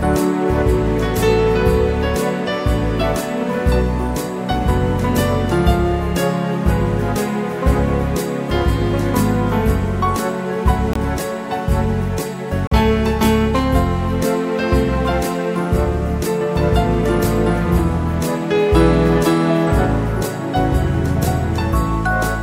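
At 10.93 to 10.96 s, then 12.67 to 12.72 s, the sound drops into a block of digital silence, about 21 ms and then 43 ms, which fits one and then two 1024-sample buffers not filled in time. Each hard cut makes a short hole.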